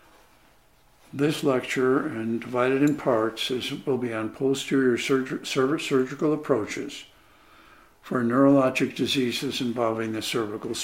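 Nothing in the audio stands out as a technical problem; there's no point where anything goes wrong.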